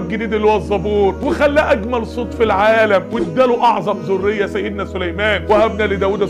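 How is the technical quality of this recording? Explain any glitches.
Listening through the recording, nothing stood out as a glitch or technical problem.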